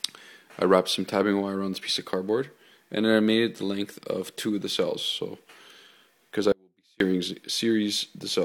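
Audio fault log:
6.52–7.00 s, audio dropout to a faint residue: the sound cuts off abruptly for about 480 ms and returns just as suddenly. The gap is not silent; a faint trace of the sound remains, roughly 40 dB below its normal level. That residue sets it apart from a hard dropout to digital silence, and the instant edges rule out a natural pause or a fade. The likely cause is a brief loss of the wanted signal while the path after the break stayed live and kept passing a weak leak.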